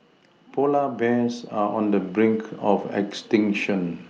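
From 0.6 s to 4.05 s the automatic gain rising fault is at work: the gain control judged the incoming level too low and kept turning its gain up, by about 8 dB over those three and a half seconds. Because it scales everything equally, the speech and the background noise grow louder together in a slow, steady swell, with no sudden jump. The call codec's band limit near 12 kHz stays constant underneath that rise.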